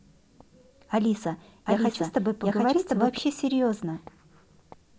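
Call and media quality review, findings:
Doubled audio track, 1.66 s to 3.18 s. Speech heard twice: a second, equally loud, full-band copy trails roughly 0.7 s behind, dry, with no decay. Starts and stops abruptly. Likely cause: a second, slower capture path mixed in, or an edit holding two offset copies. Spectrogram: every speech pattern repeated about 0.7 s later. Waveform: overlapping envelopes with hard edges at both ends.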